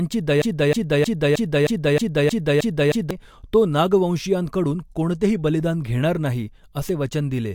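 From 0.42 to 3.11 s, a broken-record loop repeats a 0.31 s fragment exactly nine times, unlike echo, with nothing new underneath; likely a stalled stream.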